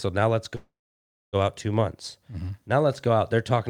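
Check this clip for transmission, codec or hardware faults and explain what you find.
There is one fault, a call audio freeze running from 0.55 s to 1.36 s, between "now let's" and "out two months". The sound is held as a fading buzz for a moment, then drops to about 0.61 s of silence before resuming exactly where it stopped, so nothing is lost but everything after arrives about 0.78 s late. The likely cause is delayed packets draining the jitter buffer. A waveform shows a brief decaying tail, then a flat gap. A spectrogram shows smeared, stationary bands fading into an empty stretch.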